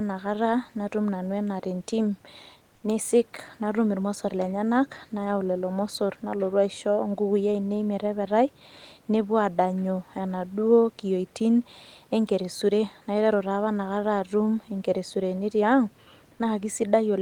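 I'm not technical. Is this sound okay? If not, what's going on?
No. Around 2.75 to 2.83 seconds, the sending side likely paused transmission because it judged nobody was talking, and the receiver filled the gap with comfort noise in place of the background. For 80 milliseconds the room's natural background noise becomes a flat, slightly quieter synthetic hush.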